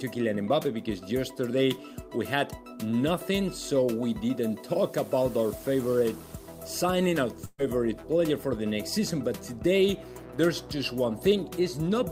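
At about 7.45 s there's a burst of packet loss running to roughly 7.61 s. A short run of packets went missing or arrived too late, so the receiver stretched out the last bit of sound it had for about 127 ms, fading it as it went, with a brief near-silence of about 10 ms. When the audio picks up again it has skipped ahead, with about 120 ms of the original simply gone.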